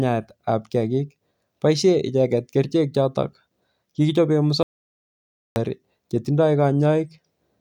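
At 4.63 s the speech cuts off abruptly and the clip falls silent until 5.56 s, an audio dropout to silence lasting about 0.93 s. No room tone or noise floor survives in the gap, so the recording chain was writing silence rather than capturing quiet. The likely cause is a momentary loss of the input signal, such as a device disconnect or brief mute, and whatever was spoken in that stretch is lost.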